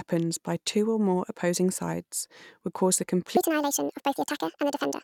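At 3.37 s, after "sides would cause the", the speech enters a section at the wrong speed. From there to the end it runs 1.65 times too fast. Pitch climbs about ten semitones, high and hurried. The likely cause is a wrong playback clock.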